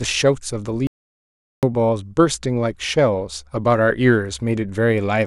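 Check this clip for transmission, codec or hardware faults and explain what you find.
One fault stands out, an audio dropout to silence. The speech cuts off abruptly at 0.87 s. It returns mid-flow at 1.63 s. For about 0.76 s there is silence, with no room tone or hiss beneath it. Whatever was said in that gap is lost. The cause is likely a brief loss of the input signal, such as a disconnected device, a failed link or an accidental mute, while the recorder kept writing silence.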